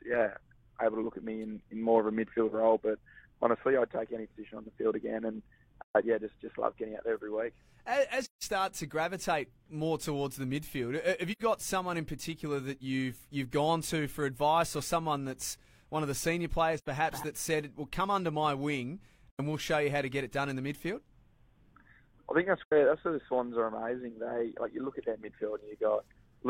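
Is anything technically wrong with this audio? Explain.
Yes. The audio has AAC frame loss with muting, heard as six brief dropouts at 5.83–5.96 s, 8.24–8.43 s, 11.32–11.41 s, 16.78–16.87 s, 19.31–19.40 s and 22.63–22.73 s. The longest gap, about 170 ms, fits four lost frames, and the shortest, about 85 ms, fits two. The decoder zeroed the spectrum of each missing frame, and the overlapping transform windows fade the sound out and back in, leaving soft-edged silent holes.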